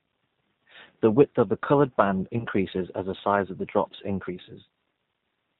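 Speech passed through a G.729 codec, its sound consistent with the 8 kbit/s G.729A variant, so nothing above 4 kHz survives and the voice sounds plainly rough and synthetic. VoIP packet loss concealed by the speech codec occurs at 0.36 s, where the decoder fills a 10 ms gap from its last pitch and filter. It recurs between 2.39 and 2.46 s, after "of the coloured band" and before "as the size of", where about 20 ms of lost audio comes back as a fading extrapolation.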